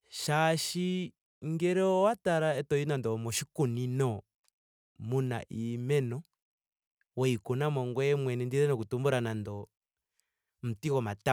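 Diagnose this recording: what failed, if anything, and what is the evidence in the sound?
Nothing failed here as far as I can hear: the speech comes across steady and intact, with no stage in the chain leaving any trace of trouble in the sound.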